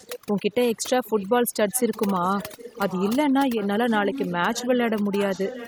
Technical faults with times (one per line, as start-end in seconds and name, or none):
0.00-5.67 overdone noise removal
0.00-0.19 echo leak
1.05-1.26 echo leak
1.69-3.13 echo leak
3.56-4.68 echo leak
5.16-5.67 echo leak